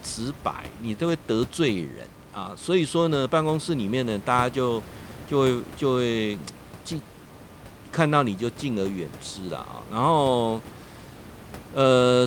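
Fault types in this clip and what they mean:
No technical faults can be heard in this speech recording. A steady background of room noise sits about 17 dB below the speech, and it belongs to the room where the microphone was rather than to the system.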